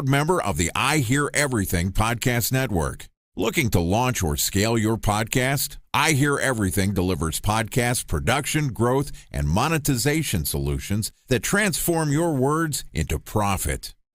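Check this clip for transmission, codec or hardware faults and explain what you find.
No transmission, codec or hardware faults can be heard in this speech recording, and the signal arrives continuous and intact throughout.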